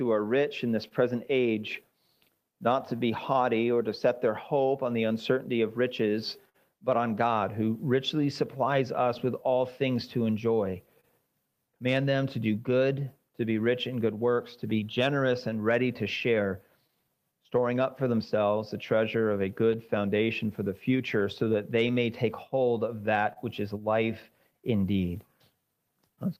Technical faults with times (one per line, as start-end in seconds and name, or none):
0.00-26.39 clock drift between sender and receiver
0.04-26.10 repeated timing corrections
0.88-4.23 scattered short gaps
6.49-12.20 scattered short gaps
14.70-17.51 scattered short gaps
19.34-23.38 scattered short gaps